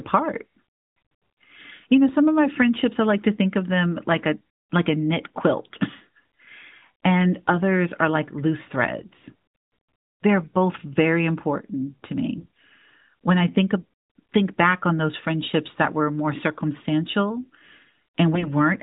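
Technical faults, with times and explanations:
5.24–5.39 s, 8.98–9.05 s, 12.36–12.59 s and 18.34–18.52 s, AMR bit errors: flipped bits in the less protected parts of the AMR-NB frames misplace excitation pulses and skew fine gain and spectral values. The speech keeps its pitch and level but turns hoarse and gargly, worst at 5.24 s.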